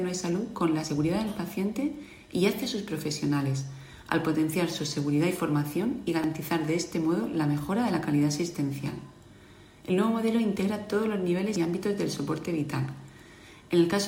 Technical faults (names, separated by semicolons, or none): dropped buffer (overrun)